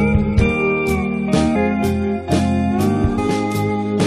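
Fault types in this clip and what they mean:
Damaged data in a compressed stream: corrupted bytes make the decoder misread a frame and hunt for the next valid header. This is heard as brief blips near 1.54 s and 3.17 s.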